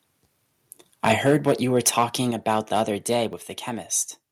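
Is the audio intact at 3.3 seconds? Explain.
No. At 3.33 s the microphone volume steps down by about 4 dB, likely the call software lowering input gain, so voice and background both drop and stay lower, unlike a dropout.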